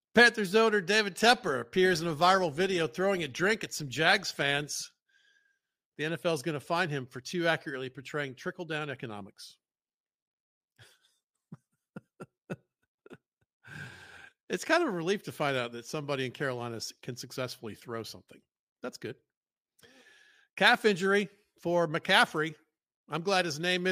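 A speech recording with no technical faults to report. Nothing in it calls for a time or a cause.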